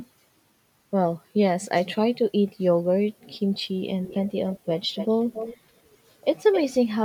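Echo leak at 4.06 to 4.31 s, 4.48 to 4.66 s, 4.94 to 5.57 s and 6.52 s in this speech clip: a copy of the speech returns 271 ms late, faint at first, then stronger, likely from a loudspeaker whose echo canceller let microphone pickup through.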